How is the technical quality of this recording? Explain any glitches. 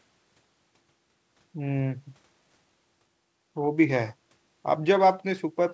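No glitches turn up anywhere in this speech recording; it just has the familiar sound of a G.722 call link, with nothing above 8 kHz, which is exactly what that path normally gives you.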